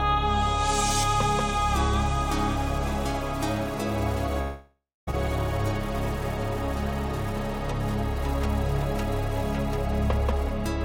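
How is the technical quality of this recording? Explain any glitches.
There's one clear glitch, a long network dropout from about 4.41 s to 5.09 s. Right at 4.41 s the sound smears into a buzzy, hissy tail that fades away, then there's roughly a quarter second of near silence before audio picks up again at 5.09 s. It jumps ahead, though, with about 0.66 s of material simply gone. What's likely happening is that the stream stopped delivering audio for that stretch. The receiver stretched out the last sound it had to paper over the gap, gave up when nothing new arrived, and carried on once packets returned, without ever recovering what was lost.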